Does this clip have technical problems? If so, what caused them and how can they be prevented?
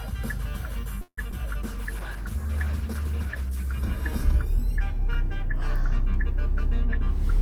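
Yes, there are three separate call faults packed into the first few seconds.

From 1.01 to 1.19 s there's a call audio freeze. The last bit of sound keeps going as a fading buzz for about 160 ms, with roughly 70 ms of that trailing into silence. Then the audio picks up right where it left off, so nothing's lost, but everything after it now lands about 160 ms later. The likely cause is packets getting held up in transit until the jitter buffer ran dry. Keeping the connection off congested or flaky links, or giving the jitter buffer a bit more headroom, would stop this.

Just after, from 1.31 to 1.34 s, comes a short concealed packet loss. About 20 ms of audio never reached the decoder, and the receiver patched around 7 ms of the hole by extending the previous sound before blending back in. It comes across as a quick smear or wobble. A steadier network path, or turning on the codec's forward error correction, would cover gaps like this.

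Then from 1.64 to 3.83 s there's a call bitrate drop. The encoder went from 48 kbps down to 14 kbps and stayed at the bottom for about 2.1 s. At that rate Opus codes everything much more coarsely and trims the top end, so the sound gets rough and dull until the rate climbs back. Giving the call more reliable upstream bandwidth, or setting a higher minimum bitrate, would prevent it.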